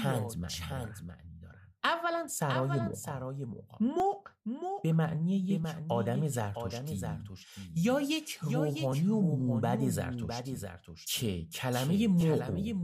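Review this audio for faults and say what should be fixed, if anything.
A doubled audio track runs throughout the speech: a second, clean copy about 5 dB quieter trails by about 0.7 s, likely from a slower second capture path.

Clock drift buffer slips produce regular clicks every 1.64 s from 0.73 s to 12.21 s, likely from two unsynchronised clocks differing by several hundred ppm.

To prevent both, route the source through a single capture path and lock all devices to one shared word clock.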